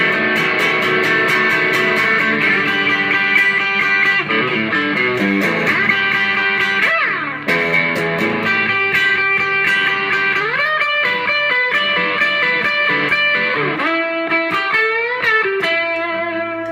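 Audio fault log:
No fault is heard in this clip.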